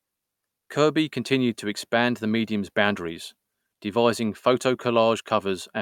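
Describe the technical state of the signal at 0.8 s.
At 0.8 s the speech signal is intact, with no audible fault at that moment.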